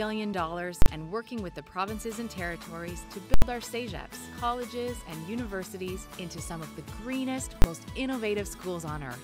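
Three violent bangs cut through the audio: at 0.82 to 0.86 s, at 3.34 to 3.42 s, and at 7.62 to 7.64 s. The 40 ms and 20 ms events land as single hard cracks. The 80 ms one at 3.34 s splits into a loud pop on entry and exit with nothing between. These are invalid numbers at full scale: a calculation produced infinite or invalid values, which were forced to the largest sample value and held there for each block.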